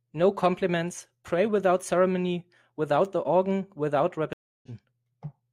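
A stream reconnect at 4.33 s silences the speech for 0.3 s. A fresh decoder resumes it at 4.68 s, roughly a fifth of a second ahead.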